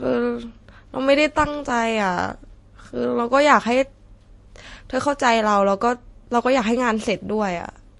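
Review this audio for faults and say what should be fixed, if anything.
Across the whole speech recording, nothing is present above 11.3 kHz, and two different families of compression artefacts sit on top of each other. This is likely transcoding between lossy codecs: the sound fits an MP3 encode near 48 kbit/s followed by a Vorbis encode near 46 kbit/s. The second encoder spent its limited bits reproducing the first one's artefacts and added its own, while the lowest band limit in the chain stayed in place. To prevent this, encode once from the original uncompressed source instead of re-encoding an already compressed file.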